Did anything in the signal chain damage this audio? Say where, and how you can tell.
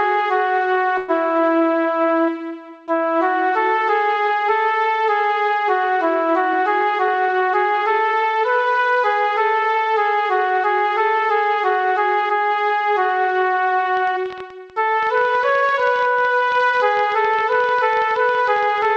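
Yes. From 0.98 to 1.11 s the sound stalls into a brief fading buzz, then resumes where it left off with nothing lost. That is a call audio freeze at the network and jitter-buffer stage, likely delayed packets, adding about 105 ms of delay.

Between 6.45 and 8.23 s the audio runs hurried at unchanged pitch, about 6% fast. This is a jitter buffer speed-up in call processing: the receiver trimmed many short pitch-period slices, roughly a tenth of a second in total, to cut excess buffered delay.

From 13.97 s to the end, irregular ticking of about 12 clicks per second sits a few dB above the sound, in pauses too. It is a train of clicks, likely interference in analogue wiring or a faulty connection or power supply. The G.722 call path, with its 8 kHz band limit, is otherwise working normally.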